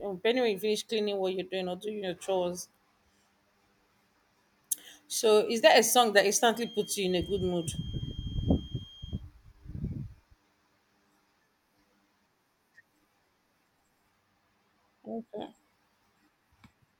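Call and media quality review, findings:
Feedback whistle 6.47–9.25 s after "that a song that": steady 3.2 kHz tone about 20 dB under speech, flat spectrogram line. Likely speaker-mic loop at feedback threshold.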